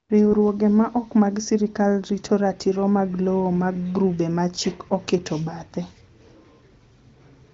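No technical faults are audible anywhere in this speech.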